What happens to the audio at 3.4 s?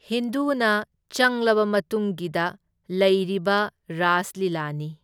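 A soft rattle of faint ticks, roughly every 20 ms, runs through 3.4 s and the whole span from 0.12 to 5.03 s. These are clock slip clicks, likely from two unsynchronised clocks about 0.1 percent apart slipping one sample at a time.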